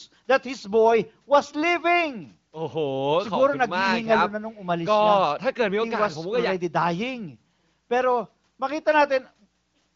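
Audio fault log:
No fault to log in this speech.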